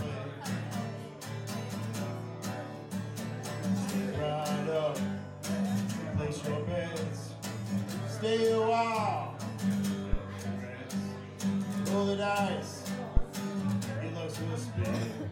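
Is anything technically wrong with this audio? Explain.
Yes. Two phantom power thumps land at 10.13 to 10.19 s and 13.17 to 13.25 s. A supply switching on a live input sends a voltage step through the coupling capacitors. Each is a deep thump, dying away in about 13 ms and 18 ms.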